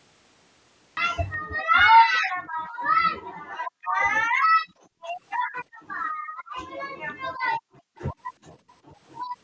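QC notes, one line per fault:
0.97 s, cut-off start: the audio opens on digital silence that breaks at 0.97 s straight into sound already under way, with no attack or fade-in. The recording or stream began late and caught the sound mid-flow. A gap or dropout would have sound on both sides of the hole, but here nothing comes before it. The hard step from silence straight into sound is why the opening sounds abrupt rather than faded up.
1.38–2.88 s, 3.18–4.00 s, 4.29–5.08 s, 5.44–6.57 s, 6.97–7.16 s and 7.32–7.96 s, background gated by the echo canceller: in each window the room sound sinks by about 40 dB and comes back when the window ends. The drops range from a brief dip of well under a second to spells of around a second. The echo canceller pulled the microphone down hard while the far side played through the loudspeaker. Unlike a network dropout, the signal never breaks, and unlike a noise gate, the timing follows the other party's playback.
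7.96–8.02 s, echo leak: just as the last gating window releases, a faint, short scrap of delayed sound slips through. It lags the original by 368 ms and sits about 30 dB below the speech. The likely cause is an echo canceller on a loudspeaker endpoint that left some of its microphone pickup in place and sent it back. The fixed lag behind the speech sets it apart from room reverberation, which trails off smoothly, and it arrives in the band-limited call audio, which has nothing above 8 kHz.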